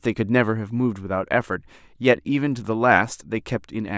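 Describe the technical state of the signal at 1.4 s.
At 1.4 s the signal is intact, with no audible fault at that point in the speech.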